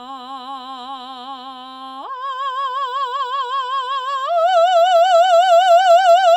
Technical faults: none

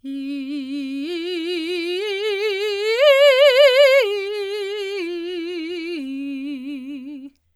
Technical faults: none

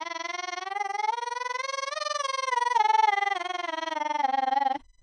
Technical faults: USB whine; overlap-add ripple; low-bitrate audio saved at a high bitrate

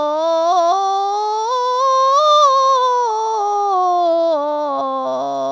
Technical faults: none

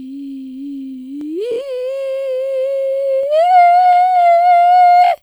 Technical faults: overlapping chunks

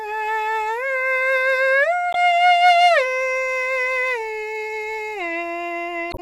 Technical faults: damaged data in a compressed stream

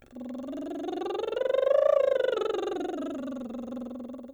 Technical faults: none

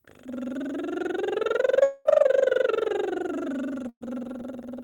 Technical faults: long network dropout; burst of packet loss

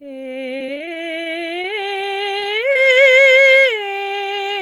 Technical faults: repeated packet loss (robotic sound); jitter buffer slow-down

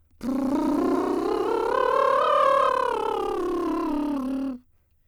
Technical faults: doubled audio track

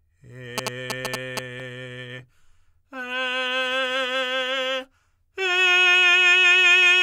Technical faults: GSM signalling bursts

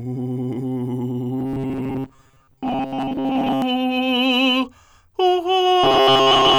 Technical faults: robotic sound from repeated short buffers

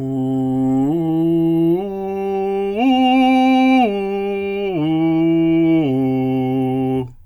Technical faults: none

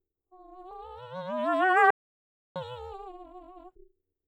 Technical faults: overlap-add ripple; audio dropout to silence

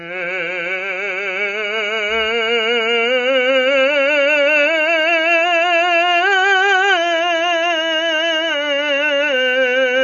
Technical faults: AAC compression

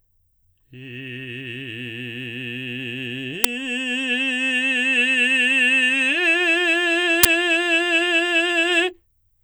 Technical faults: uninitialised buffer

